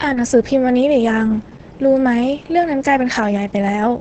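From start to finish the speech sounds muffled, hoarse and faintly robotic, with nothing above 8.5 kHz. This is heavy Opus voice compression: the SILK linear-prediction coder, held to wideband, codes the excitation coarsely, which fits a rate near 10 kbps.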